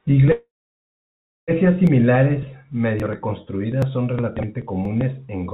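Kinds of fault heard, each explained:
Call audio freeze (0.32 to 1.51 s): speech halts for about 1.2 s, mostly silent, then resumes with nothing lost, likely because late packets emptied the jitter buffer.
Dropped buffer (overrun) (1.87, 3.00, 3.82, 4.85 s): brief jumps where the speech skips a few milliseconds, likely samples overwritten before the program collected them.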